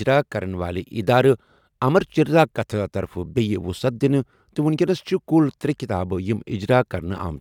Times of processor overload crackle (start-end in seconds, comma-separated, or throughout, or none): none